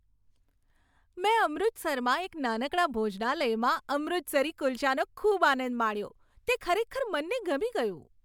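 A speech recording with nothing technically wrong to report. No fault of any kind can be heard at any point in it.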